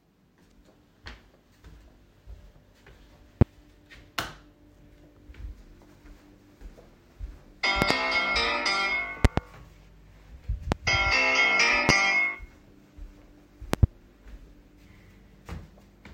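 An everyday-sound recording with loud pops at 3.41–3.44, 7.82–7.93 (double), 9.25–9.40 (double), 10.72–10.75, 11.89–11.92 and 13.74–13.86 s, roughly 20 to 25 dB above the sound, likely from voltage pulses such as switching or static; unlike dropouts, the sound continues beneath each thump.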